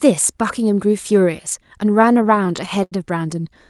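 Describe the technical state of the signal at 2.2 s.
At 2.2 s the speech is inside repeated stalls (stutter), 2.01 to 2.93 s. The jitter buffer kept emptying, so eleven gaps, the longest 82 ms, were filled by prolonging the last sound. It drags and stutters. The spectrogram shows smeared, frozen frames, and the waveform shows fading patches.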